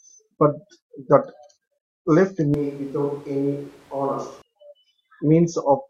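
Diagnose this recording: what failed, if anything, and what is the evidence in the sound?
Capture stage: from 2.54 to 4.42 s the speech abruptly turns roomy, thin and noisier, about 5 dB down, likely a switch to a distant microphone.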